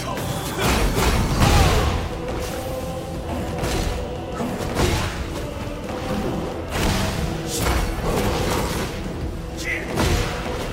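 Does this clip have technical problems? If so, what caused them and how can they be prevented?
No, no technical faults audible.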